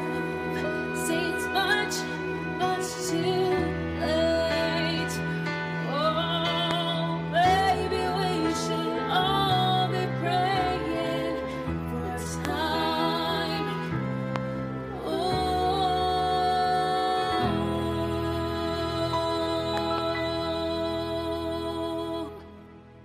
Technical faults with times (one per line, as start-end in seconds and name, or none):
6.71-6.73 loud pop
12.45-12.47 loud pop
14.36-14.38 loud pop
19.77-20.00 loud pop
20.88 corrupt frame decoded